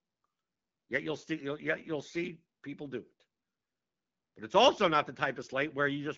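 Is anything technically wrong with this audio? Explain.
Yes. From 5.85 s to the end, an AMR rate drop makes the speech rougher and more synthetic, which fits the codec stepping down from 12.65 to 8.85 kbit/s. Unlike packet loss or a narrowband fallback, there is no gap and the bandwidth stays the same.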